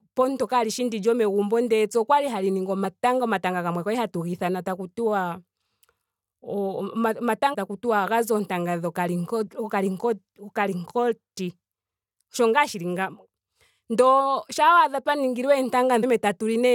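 Damaged data in a compressed stream shows up three times in this speech: at 2.84 s, between "epya okwali hali ningi" and "omatanga gamwe kwali hatu"; from 7.53 to 7.55 s; and at 16.02 s. Each time, corrupted bytes in the encoded stream leave the decoder misreading frames and losing sync until it finds the next valid frame header. This produces a brief chirp or blip of roughly 15 to 20 ms.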